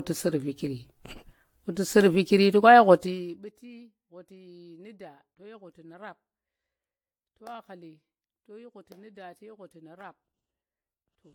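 The speech sounds swirly, hollow and smeared throughout, with blurred consonant attacks and nothing above 18.6 kHz. The likely cause is generation loss, with the audio re-encoded around seven times through a lossy codec, consistent with AAC-LC at 96 kbit/s.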